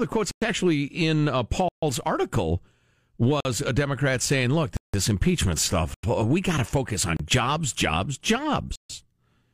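The speech drops into blocks of digital silence at 0.31, 1.69, 3.40, 4.77, 5.94, 7.17 and 8.76 s, lasting 29 to 169 ms. Output buffers likely went unfilled, zeroing samples abruptly. The 46 ms gap fits a 2048-sample block.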